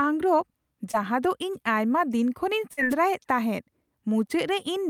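A brief smear from 0.91 to 0.95 s, just before "ᱫᱚ ᱤᱧ ᱟᱭᱢᱟ ᱫᱤᱱ", and a longer wobble from 2.73 to 2.79 s, after "ᱤᱧ ᱟᱭᱢᱟ ᱫᱤᱱ ᱠᱷᱚᱱᱤᱧ", are short concealed packet loss: about 20 ms and then 40 ms of audio arrived too late, and the decoder papered over each gap by extending the preceding sound.

At 2.90 to 2.95 s, right after "ᱤᱧ ᱟᱭᱢᱟ ᱫᱤᱱ ᱠᱷᱚᱱᱤᱧ", a short swish of static cuts across the speech. This is a wireless microphone noise hit, where the FM radio link faded as reflected signals cancelled and the receiver's noise briefly rose over the signal.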